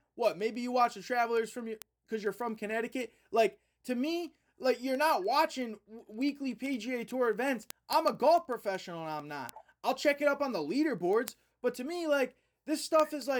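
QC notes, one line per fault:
0.10–13.37 s, word clock ticks: a steady run of sharp ticks, about every 70 ms and around two hundred in all, through the speech. The receiving end is running on its own clock rather than locking to the sender's, and the two drift apart by a few hundred ppm. Every time they slip past each other a single sample gets dropped or doubled, leaving a tiny discontinuity that clicks, which is why the ticks come at such an even rate.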